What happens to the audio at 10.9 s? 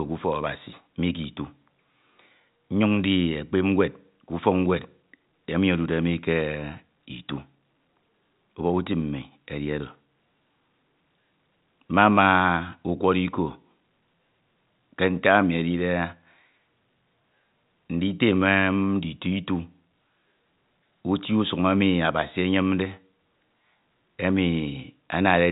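Nothing goes wrong at 10.9 s; the speech there runs on intact, carried within the usual telephone band that stops a little below 4 kHz.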